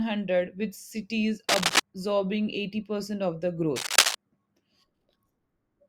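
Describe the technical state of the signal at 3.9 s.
At 3.9 s you're right in the middle of a burst of cable scratch noise, running from about 3.76 to 4.16 s, just after "of the". It's a dense, uneven scratching and rustling laid over the speech, and it's actually a bit louder than the speech itself, roughly 5 dB above it. The likely cause is a worn cable, connector or control being moved, so its contact resistance jumps around and throws those ragged noise bursts into the signal.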